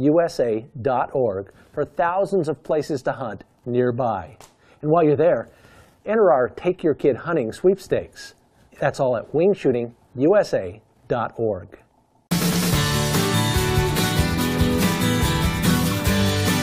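Nothing stood out on listening; no technical faults could be heard anywhere in the recording.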